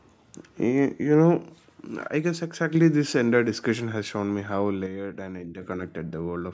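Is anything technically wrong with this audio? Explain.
Yes. The speech level drops abruptly by about 6 dB from 2.08 to 2.75 s and again from 4.86 to 5.62 s, then snaps back. The likely cause is one channel dropping out: with one side of the stereo signal gone, the mono sum keeps only half of what the two channels shared. Unlike a fade or gain ride, the level steps down and up instantly and holds a fixed 6 dB. The call's microphone processing leaves nothing above 8 kHz.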